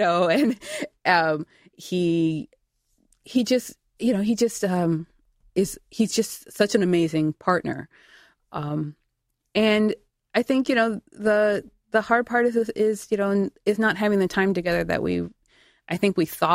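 No technical faults are audible in the speech. Nothing at any point in the audio calls for a time mark or an explanation.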